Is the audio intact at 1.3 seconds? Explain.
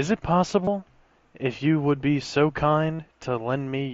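Yes, the speech at 1.3 seconds is intact, with no fault at that moment.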